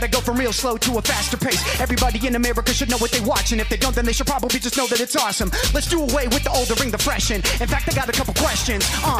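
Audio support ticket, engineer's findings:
No audible faults found; nothing to escalate.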